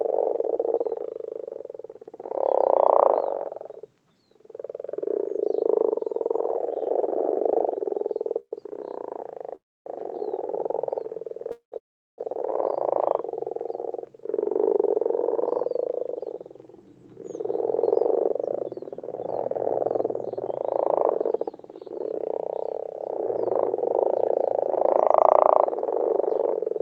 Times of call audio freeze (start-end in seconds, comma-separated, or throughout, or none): 8.39-8.53, 9.55-9.87, 11.51-12.20